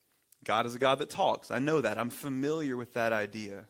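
No technical faults can be heard anywhere in the recording; the speech signal stays intact and continuous throughout.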